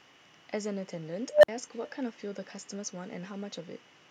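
From the start, every phrase carries an echo with no canceller: the far end's loudspeaker feeds its microphone, returning a thinner copy about 18 dB down, roughly 0.4 s late.

At 1.30 s an unstable filter runs away: a tone near 700 Hz swells over 0.13 s into clipping, then overflow cuts the sound for 0.05 s until 1.48 s.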